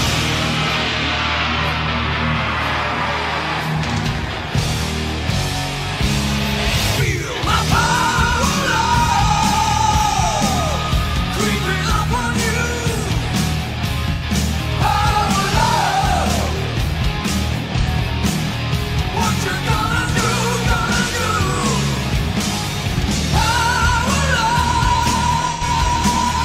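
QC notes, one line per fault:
7.86–7.93 s, 14.13–14.23 s, 17.80–17.87 s, 25.52–25.63 s: AAC frame loss with concealment. Each gap is 0.07 to 0.1 s, which fits one or two missing frames. The decoder rebuilt each gap from the last good spectrum with scrambled phase, so it sounds like a brief smeared, noisy or phasey blip, not a dropout. A spectrogram shows short blocks where fine harmonic detail blurs into flat noisy energy. The waveform keeps roughly the same envelope, with no drop to zero.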